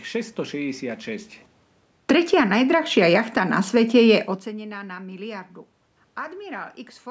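From 1.95 s to 4.76 s the level sinks by about 7 dB as the automatic gain falls. The gain control judged the input too loud and eased its gain down over nearly three seconds. What separates this from the talker leaning away, which happens around 1 s and again around 4 s, is that the room noise drops with the speech. When a talker moves, only the speech changes and the background stays put.

Inside that stretch, from 2.37 s to 3.85 s, the automatic gain rises by about 4 dB, working against the fall. Here the control decided the input had become too quiet and lifted its gain over about one and a half seconds. Speech and background swell together, which again rules out a talker moving closer. The two adjustments overlap, so the level drifts down, partly recovers, then sinks again before settling. All of this sits within the call microphone band, which has nothing above 8 kHz.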